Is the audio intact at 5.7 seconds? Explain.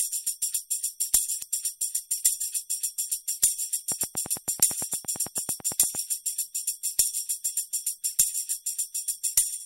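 No. A train of clicks runs from 3.92 to 5.96 s: about twenty near-identical pops at a regular 8.9 per second, peaking roughly 10 dB above the sound, likely from electrical interference or a faulty connection. Their steady spacing separates them from random crackle.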